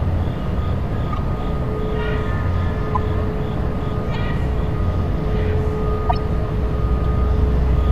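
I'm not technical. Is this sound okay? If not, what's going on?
No, there's a corrupt frame decoded problem: damaged chunks of compressed data got played anyway, giving short chirps or noise blips at 1.12–1.18 s, 2.94–2.97 s, 4.14 s and 6.09–6.14 s. The last one is the loudest.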